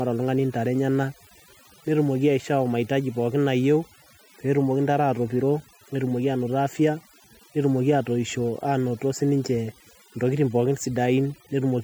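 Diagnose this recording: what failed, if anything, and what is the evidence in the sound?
Mains buzz, entering at the analogue wiring stage, runs through the whole clip as a steady raspy buzz roughly 35 dB below the speech. It is built on 50 Hz harmonics reaching into the kilohertz range, produced by sharp switching spikes twice per mains cycle from a dimmer, rectifier or unshielded run.

Overdone noise removal, a processing-stage fault, is present throughout. The background between phrases drops and breaks up into twinkling specks. The reduction was set too strongly, cutting whole frequency bands near its noise estimate and taking quiet speech detail with them.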